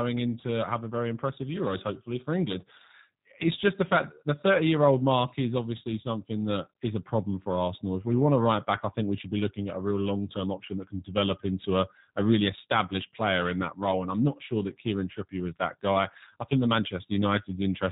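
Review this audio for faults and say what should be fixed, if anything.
G.729 codec damage runs throughout the speech. Each 10 ms frame is rebuilt from a vocal-tract filter, a pitch predictor and a few pulses, which gives the rough, synthetic edge. Nothing above 4 kHz survives, and the sound fits an 8 kbit/s stream. To prevent this, record or transmit with a wideband or higher-bitrate codec rather than G.729.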